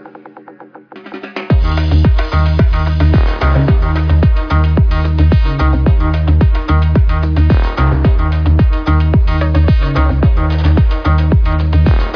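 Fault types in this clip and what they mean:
No technical faults can be heard anywhere in the audio; the signal stays continuous and steady throughout.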